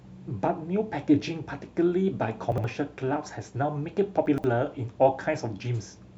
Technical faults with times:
2.52-2.64 chunks out of order
4.26-4.44 chunks out of order

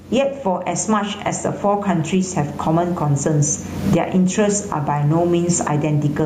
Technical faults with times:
0.00-6.25 gain pumping

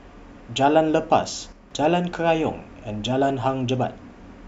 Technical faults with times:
1.52-1.71 one channel drops out

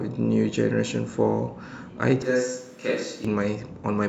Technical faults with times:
2.22-3.25 switch to a distant microphone

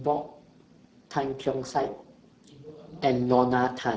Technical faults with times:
0.00-3.97 Speex codec

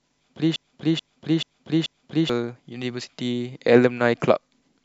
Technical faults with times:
0.56-2.29 broken-record loop

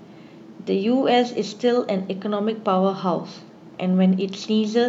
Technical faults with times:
none

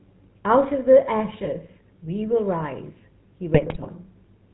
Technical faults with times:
0.00-4.54 GSM full-rate codec
1.30-1.47 GSM bit errors
3.54-3.89 GSM bit errors

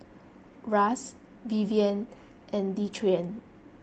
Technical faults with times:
none

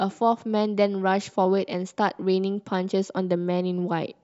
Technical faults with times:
none

